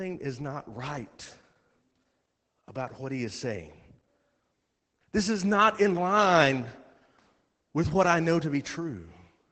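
Opus voice compression runs through the whole speech clip. Nothing survives above about 8.7 kHz, so the band is cut to wideband and the top sheen of consonants is gone. The damage is plainly audible. The sound points to the SILK linear-prediction coder working at a low bitrate, near 12 kbps. At that rate the excitation is coded coarsely. Speech comes out muffled and hoarse, with a faint robotic edge.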